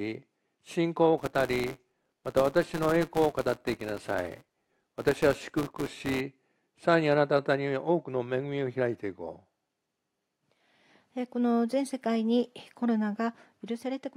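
From 1.17 s to 6.22 s, a buzz sits under the sound at 172 Hz. This is a filter restarted on every block. The filter drops its stored state at each block boundary and starts again from silence. Each restart leaves a tiny transient. These transients repeat so fast that they fuse into a steady buzz. The rate fits a 256-sample block. The buzz rises and falls with the level of the sound.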